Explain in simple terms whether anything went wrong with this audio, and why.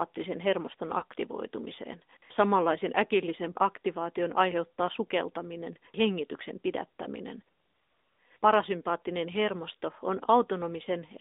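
The whole clip went through the AMR narrowband mobile codec, the speech compression used on older mobile networks. It keeps only about 250 Hz to 3.7 kHz and rebuilds the voice from a simplified model, so the speech sounds thin, muffled and noticeably buzzy throughout.

There are also two lost AMR speech frames, each a single missing 20 ms frame, at 1.00 to 1.04 s and at 7.04 to 7.08 s, just after "aktivaation aiheuttaa sukeltaminen hengityksen". Each time, the decoder patched the gap by reusing the previous sound at lower level, heard as a brief dip or warble.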